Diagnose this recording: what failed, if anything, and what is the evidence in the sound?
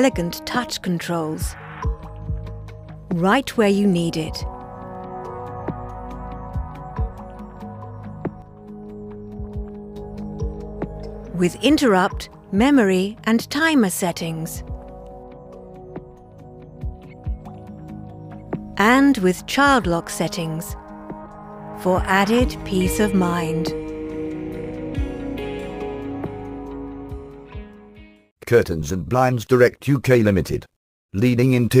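A digital gain stage, likely a one-bit shift applied with no ramp, produced a sudden gain jump from 8.42 to 9.96 s. The sound and its background noise fall together by about 6 dB at one instant, then step back up equally abruptly.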